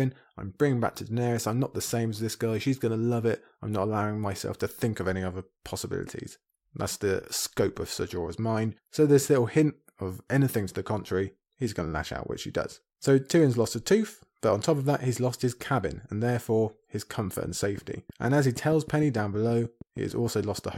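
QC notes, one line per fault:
17.63–20.75 s, train of clicks: after "therefore his comfort and", about twenty regular clicks at 6.4 per second, roughly as loud as the speech, likely interference.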